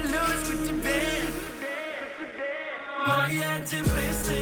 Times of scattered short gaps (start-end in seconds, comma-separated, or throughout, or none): 0.07-4.25